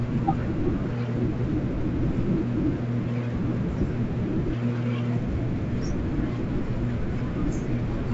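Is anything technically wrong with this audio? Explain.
No, nothing is technically wrong with this audio.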